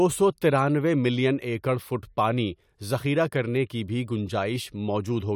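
Nothing goes wrong anywhere in this bit of speech, so there's no technical fault to point to.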